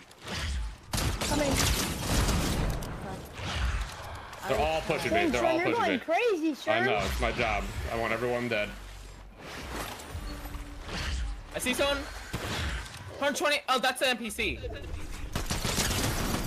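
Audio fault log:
No technical faults can be heard anywhere in the audio, with the signal level, continuity and frequency balance holding steady across the whole clip.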